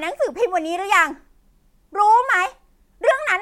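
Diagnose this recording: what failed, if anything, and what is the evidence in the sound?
Nothing failed in this recording, and there is no evidence in the sound of any fault.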